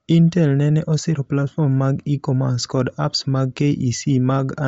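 All the way through, the speech has a breathy, grainy edge and nothing above 7.7 kHz, likely Bluetooth LC3 compression noise-filling a starved upper band.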